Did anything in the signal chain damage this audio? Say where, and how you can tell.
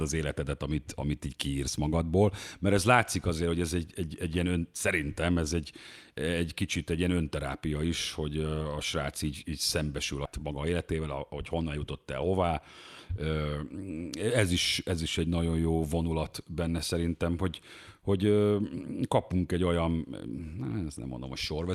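Yes. Skip ahead at 10.25 s, right after "így így szembesül a": roughly 400 ms of speech is missing and the two sides join with no gap. At the network or jitter buffer stage, a stretch was discarded while later audio was already queued, so playback jumped forward.

Jitter buffer speed-up from 10.38 to 12.51 s: the speech runs about 9% fast at unchanged pitch and sounds hurried. The buffer was holding too much audio and trimmed short pitch-period pieces repeatedly, about 200 ms in total, to pull the delay back down.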